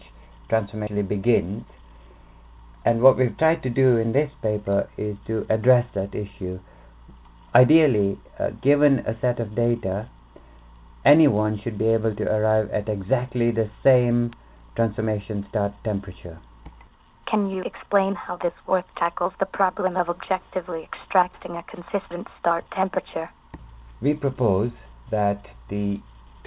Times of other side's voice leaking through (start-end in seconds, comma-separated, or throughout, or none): none